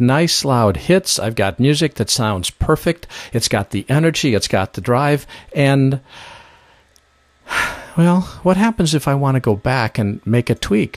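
No technical faults are audible anywhere in this audio.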